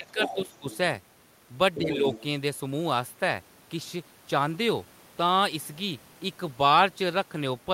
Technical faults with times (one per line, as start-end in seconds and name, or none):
0.00-0.66 speech suppressed in double talk
0.08-0.77 other side's voice leaking through
1.75-2.23 other side's voice leaking through
1.78-2.05 speech suppressed in double talk